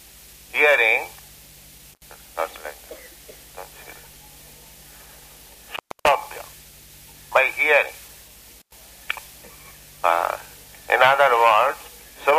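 The sound drops out abruptly three times, each gap bracketed by crackle and filled with faint hiss: at 1.92 to 2.02 s with about 81 ms of silence, at 5.73 to 6.09 s for the longest break of about 284 ms, and at 8.59 to 8.73 s for about 105 ms. This is intermittent contact: a loose cable or plug momentarily opening the signal path, so the audio vanishes until the connection closes again.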